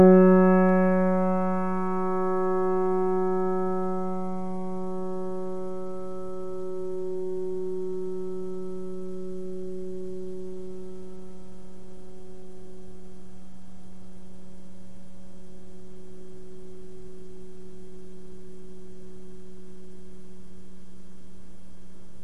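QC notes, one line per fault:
Throughout: DC offset. The whole waveform sits shifted off zero by a constant of about -32 dBFS. It isn't heard as a tone. It shows as steady energy at the very bottom of the spectrum and eats headroom on one side.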